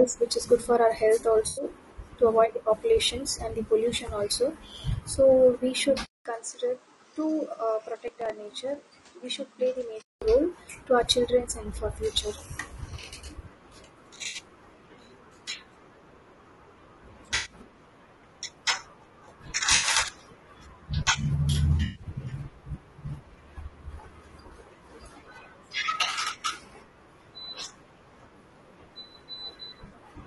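The whole speech clip has a rough, grainy quality, with noise between the harmonics and a thin, somewhat synthetic top end. That's the signature of low-delay AAC compression, likely AAC-ELD at around 32 kbps. Its short frames can't resolve pitch harmonics cleanly, and at that rate there aren't enough bits to cover the gaps, so the damage is plainly audible the whole way through.

The first AAC frame loss with concealment comes at 1.47 to 1.65 s, just before "to avoid." About 100 ms of audio goes missing, and the decoder patches it from the last good spectrum, so you get a short smeared, noisy, phasey blur rather than a clean dropout.

At 6.05 s the sound cuts out for about 200 ms, then comes back duller and boxier, noticeably quieter by roughly 10 dB, with a new noise floor sitting around 30 dB under the speech. Nothing gets through above 9.7 kHz. That's an input switched to a poorer device, likely a fallback mic or a headset call profile. 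The clearer sound returns at 10.22 s.

Inside that stretch, from 8.08 to 8.30 s, there's a short burst of crackle, which is processor overload crackle. Around five tiny buffers of about 3 ms each miss their deadline in quick succession. Each miss drops a hard-edged sliver of silence into the signal, and together they sound like gritty tearing riding on the speech.

The concealed frame losses come back at 14.27 to 14.37 s (about 60 ms), 17.35 to 17.53 s (about 100 ms), 19.75 to 19.89 s (about 80 ms), 21.85 to 22.03 s (about 100 ms) and 29.87 to 29.93 s (about 40 ms). Each one is the same kind of brief smeared, phasey patch.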